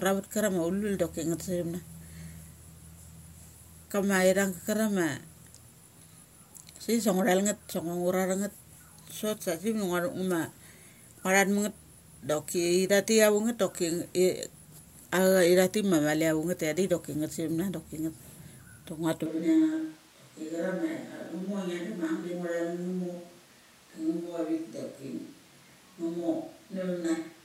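It's a speech clip, and at 19.26 s the sound suddenly turns roomy and hollow, thins out in the bass, drops about 5 dB and picks up more room noise, staying that way to the end. That's a switch to a distant microphone, likely after the close mic's feed dropped out.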